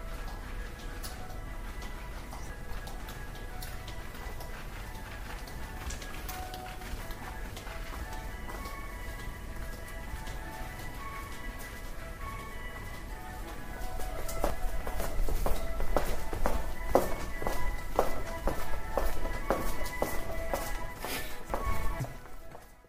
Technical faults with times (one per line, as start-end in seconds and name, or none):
2.50-3.50 chunks out of order
7.00-8.00 chunks out of order
14.00-15.00 chunks out of order
20.50-22.00 chunks out of order